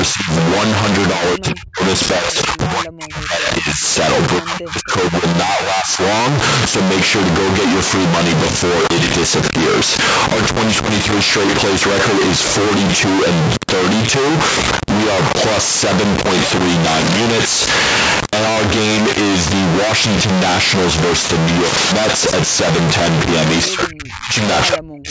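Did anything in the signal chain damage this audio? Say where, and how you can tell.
Yes. Stuck bit, throughout: a distortion rides on the speech and the pauses are filled with noise rather than silence. That points to the converter or the digital line after it, likely one data bit held fixed, throwing roughly half the samples off by that bit's weight.

Speech suppressed in double talk, at 0.13–0.3, 1.16–1.8, 2.2–3.83, 4.39–5.23, 5.45–6.0, 23.7–24.35 and 24.68–25.1 s: the talker dips by about 10 dB up to around 40 dB, sometimes nearly vanishing. This is call processing, likely an echo canceller attenuating the near talker while the far side spoke.

Cable scratch noise, at 8.38–8.56, 16.87–17.17 and 21.63–21.92 s: short, dense, uneven bursts of rustling sit about 5 to 10 dB above the signal. This is the analogue wiring, likely a worn cable or connector changing its contact resistance as it moved.

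Echo leak, at 23.63–23.67 s: a brief copy of the speech returns 202 ms late, about 15 dB below the direct sound. This is call processing, likely a far-end loudspeaker echo that the canceller failed to remove fully before sending it back.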